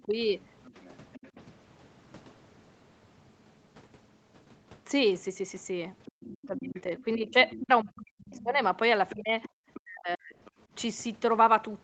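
From 0.0 to 1.3 s a faint second voice, about 25 dB under the talker, sits behind the speech. This is the other side's voice leaking through, likely loudspeaker echo that the canceller left in the microphone signal. Unlike background chatter, it is a single voice. Inside it, from 0.03 to 0.12 s, the talker dips by roughly 15 dB, and at 1.36 to 1.4 s there is a slight dip. This is speech suppressed in double talk: the canceller likely turned the talker down along with the echo. From 6.05 to 7.6 s the leak returns at about 20 dB below, and from 6.13 to 8.59 s the talker is pushed down by about 40 dB, close to silence. The same pattern repeats with the leak at 9.09 to 9.8 s and suppression at 9.14 to 10.35 s, and a brief leak follows at 10.45 to 10.51 s, around 30 dB down. Throughout, the Opus call path limits the audio to 8 kHz.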